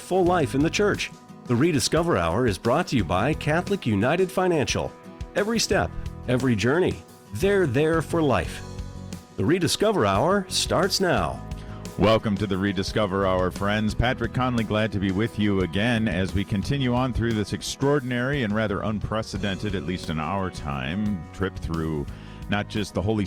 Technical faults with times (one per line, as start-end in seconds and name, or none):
none